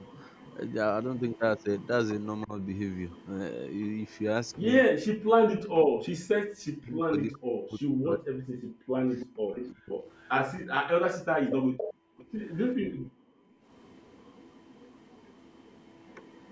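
A speech clip with echo leak in four stretches: 0 to 4.6 s, 9.2 to 10.29 s, 11.5 to 12.26 s, and 13.73 s to the end. A delayed copy of the voice trails it, 325 ms behind at first and 404 ms behind later. It is faint, about 30 dB down, except at 9.2 and 11.5 s, where it rises to about 10 dB down. A loudspeaker echo is likely getting past an incomplete echo canceller. Speech suppressed in double talk appears as a brief dip of about 15 dB at 2.44 to 2.56 s. From 5.43 to 9.98 s the voice is turned down, sometimes by roughly 40 dB, for about four seconds in total. The likely cause is an echo canceller muting the talker while the far side speaks. The background is gated by the echo canceller at 9.26 to 9.43 s and again at 11.94 to 13.65 s. The room sound falls away by about 40 dB. The dips add up to a little over a second. The canceller clamps the microphone while the loudspeaker plays, then releases it.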